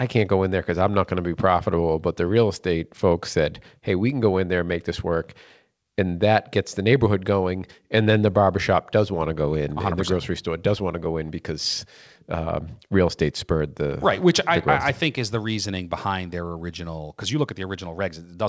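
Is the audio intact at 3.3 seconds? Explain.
Yes, the audio is intact at 3.3 seconds, with the speech passing through the WebRTC call path as expected and, as the G.722 coding of that path implies, carrying nothing above 8 kHz.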